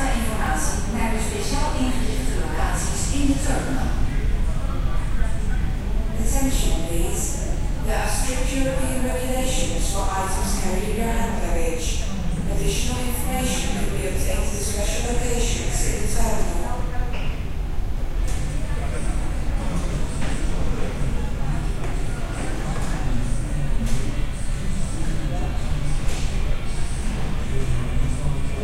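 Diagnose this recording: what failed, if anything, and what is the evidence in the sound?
Two devices on independent clocks are likely drifting apart, so the buffer between them slowly runs over or under until a small block of samples, on the order of fifteen, is dropped or repeated. These clock drift buffer slips produce a regular click every 0.79 s from 0.46 s to 28.03 s, about forty in all, consistent with a clock error near 500 ppm.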